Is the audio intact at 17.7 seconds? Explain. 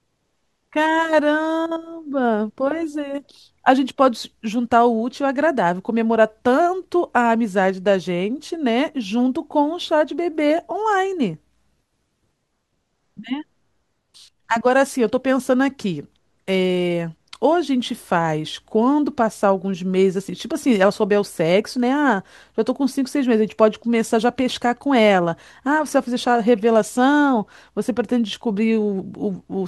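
Yes, the audio is intact at 17.7 seconds, with no fault present at that moment.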